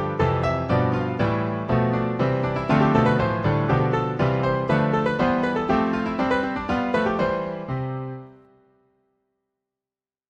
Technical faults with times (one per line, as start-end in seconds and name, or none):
none